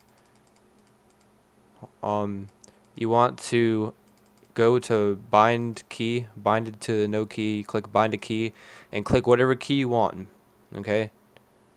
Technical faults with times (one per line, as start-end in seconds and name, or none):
none